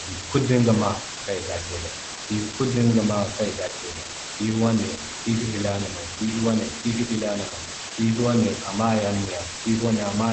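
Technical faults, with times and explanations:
throughout, low bit depth with dither: a constant, even hiss sits only about 5 dB below the speech, as 4-bit rounding with dither turns the error into white noise.
throughout, Opus voice compression: the speech sounds muffled, hoarse and slightly robotic, with nothing above 8.5 kHz, as coarse SILK coding fits a low bitrate near 12 kbps.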